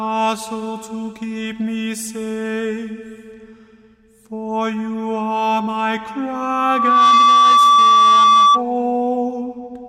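From 6.35 to 8.63 s, loudspeaker feedback squeal: a 1.2 kHz tone swells over roughly 0.7 s into a howl about 10 dB above the sound, as the mic-speaker loop exceeds unity gain.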